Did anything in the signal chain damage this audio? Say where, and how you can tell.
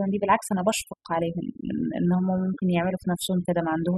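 Yes. Overdone noise removal runs throughout the speech. A noise suppressor set too aggressively is pulling individual frequency bands down whenever they sit near its noise estimate. The pauses collapse to near silence with twinkling specks, and quieter voice components vanish too.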